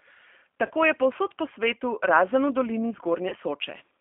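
Throughout, the speech carries plainly audible G.729 codec damage, which fits an 8 kbit/s G.729A stream. Each 10 ms frame is rebuilt from a filter, pitch predictor and sparse pulses, so the speech sounds rough and synthetic. A spectrogram shows energy confined to about 250 Hz to 3.4 kHz, with smeared harmonics.

At 0.66 to 0.71 s and again at 3.29 to 3.35 s, VoIP packet loss concealed by the speech codec fills a gap of about 30 ms, which fits one lost packet. The decoder repeats its last pitch and filter at falling gain, producing a brief buzzy tone or coloured noise that fades. The waveform shows a short, decaying stretch, and the voice stays weak or distorted for a moment after packets return.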